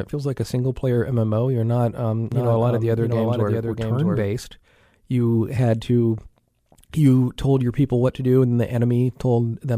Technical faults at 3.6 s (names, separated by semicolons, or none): doubled audio track